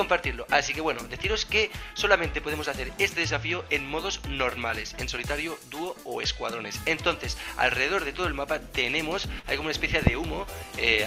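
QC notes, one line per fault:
9.39–9.46 s, short concealed packet loss: about 40 ms of the stream failed to reach the decoder in time, and the receiver papered over the gap by extending the preceding sound, then crossfading back into the real signal around 9.46 s. What is heard is a brief smeared or wobbly patch where the audio seems to hang for a moment. Any short transient that fell inside those 40 ms is lost outright, since the fill only continues what came before it.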